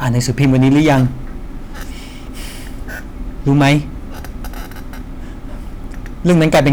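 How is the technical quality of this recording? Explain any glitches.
The recording has hard clipping in three places: 0.06 to 1.05 s and 3.48 to 3.77 s, overdriven by about 8 dB, then 6.27 to 6.73 s, by about 16 dB. The speech exceeds what a stage can pass, so its peaks are sliced flat, adding high harmonics heard as a crackling, harsh fuzz, worst in the final burst. Unlike gentle saturation, the distortion starts abruptly on loud moments rather than thickening the sound gradually.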